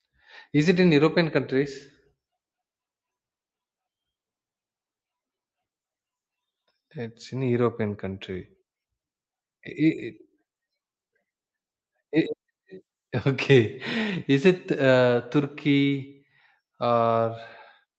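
A speech recording carries clock drift between sender and receiver throughout: the sending clock runs about one and a half percent slow, so the receiver's jitter buffer keeps draining and has to compensate. Unlike packet loss, which leaves isolated gaps or smeared concealment, this drift produces a steady one-directional lag. The compensation appears as repeated timing corrections from 0.56 s to 17.89 s, where the receiver repeats small slices to hold playback at about 98% speed, adding roughly 300 ms overall. These corrections fall at uneven intervals, heard, if at all, as faint hiccups and a wavering tempo rather than the smooth, even slowdown of a deliberate time-stretch. The Opus call path tops out around 8 kHz.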